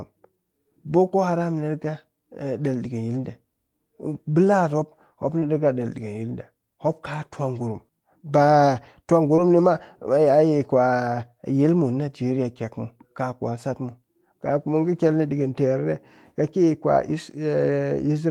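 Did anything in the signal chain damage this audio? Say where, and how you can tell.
Yes. Short concealed packet loss at 5.39–5.44 s and 9.36–9.40 s: network packets arrived too late, so the receiver extended the previous sound for about 20 ms, leaving a brief smear.

Lost packet rebuilt from error correction at 5.42, 9.38 and 15.08 s: in the codec, the next packet's low-bitrate copy filled each 20 ms gap, making those frames audibly rougher and noisier.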